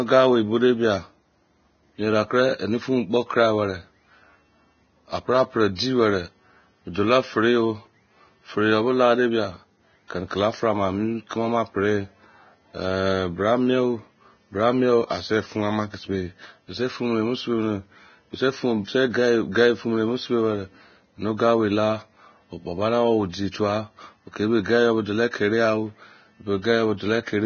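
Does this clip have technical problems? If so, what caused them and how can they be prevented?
Yes. Throughout the speech the treble is gone above about 6.6 kHz, and what remains below that cut-off is hissy and grainy, with roughened tones and smeared consonant onsets. The cause is likely heavy Vorbis compression: the encoder keeps a smooth spectral floor but quantises the residue so coarsely that fine detail turns into noise of similar energy. The degree of damage fits a bitrate of around 18 kbps. Encoding at a higher Vorbis quality setting, or at a bitrate well above this, would prevent it.

There is also a pre-echo from 23.51 to 23.54 s, where a short hiss runs for about 26 ms ahead of a sharp attack, which then sounds softened. The codec spreads quantisation noise across an entire transform block, so when a loud onset falls late in the block, the noise sized for that onset leaks into the quiet stretch before it. 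A higher bitrate, or an encoder with better transient detection and block switching, would prevent this smearing.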